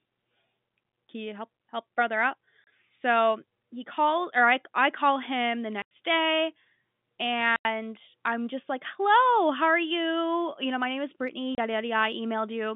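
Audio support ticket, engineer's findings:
Packet loss filled with silence: hard-edged gaps at 2.64–2.67 s, 5.82–5.91 s, 7.56–7.65 s, 11.55–11.58 s. Gaps of 30 and 90 ms fit 30 ms packets dropped and replaced by silence. Narrow G.711 telephone band intact.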